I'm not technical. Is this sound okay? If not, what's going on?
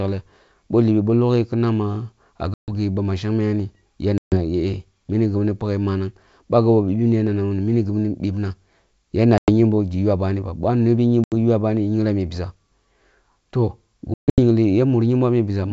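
No. The speech drops out five times, at 2.54, 4.18, 9.38, 11.24 and 14.14 seconds, each for a tenth to a quarter of a second. This is packet loss on an ADPCM call. Chunks of the call never arrived and were replaced by silence, so the receiver loses track of the sound's level and briefly stumbles when speech returns, as at "gi ba ma". The gap after "ba boh a’ nobi" is shortest.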